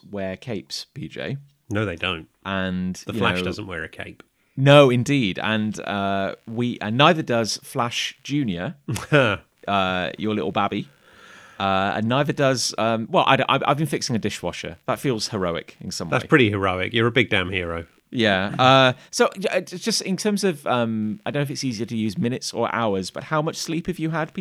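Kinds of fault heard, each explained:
Computer activity noise: from 5.49 s to the end, a faint buzzing chirp sits far below the speech, pulsing around 70 times a second. Changing processor or graphics load shifts the ground shared with the audio circuit, so it tracks machine activity rather than the talking.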